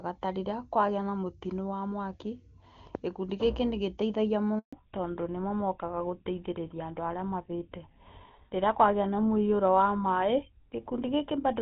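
At 4.59 s, right after "gĩkundi gĩkĩ nĩgĩ teithagia", the speech cuts out in a handover gap lasting 140 ms, until 4.73 s. As the call was passed from one network to another, no speech frames got through, so the sound dies away almost at once and leaves a short stretch of silence. Whatever was said in that moment is gone. On a waveform this shows as a flat line, and on a spectrogram as an empty vertical band across every frequency.

From 4.73 s to the end, the call has fallen back to narrowband. Before the gap, the sound has the full, crisp top end of HD Voice, with energy reaching toward 7 kHz, which points to AMR-WB running at its top rate of 23.85 kbit/s. After the handover, everything above 4 kHz is missing. The speech turns duller and rougher, consistent with the older GSM full-rate codec at 13 kbit/s. A spectrogram shows a hard horizontal ceiling at 4 kHz for the rest of the clip.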